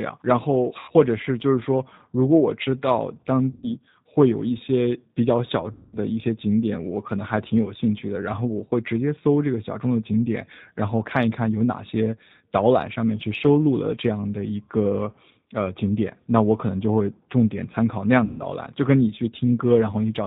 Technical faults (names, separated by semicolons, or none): G.729 codec; VoIP packet loss concealed by the speech codec